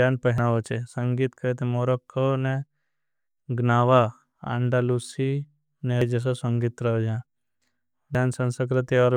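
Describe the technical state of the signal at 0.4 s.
At 0.38 s the speech jumps forward. This is a case of compressed frames skipped. A block of the encoded audio never reached the output, either missing from the file or rejected by the decoder as damaged. Roughly a tenth of a second is lost. That fits a single dropped frame of 85.3 ms. The join is an abrupt break where the speech lurches ahead.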